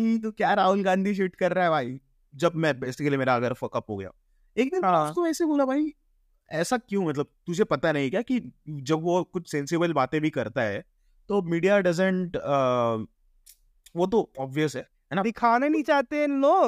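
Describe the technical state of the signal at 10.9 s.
At 10.9 s the signal is intact, with no audible fault at that point in the speech.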